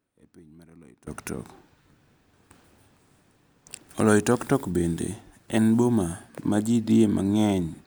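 One channel inverted, from 0 to 1.07 s: the speech falls by about 23 dB and sounds faint. The likely cause is reversed polarity on one stereo channel, so the centred content cancels when both channels sum to mono.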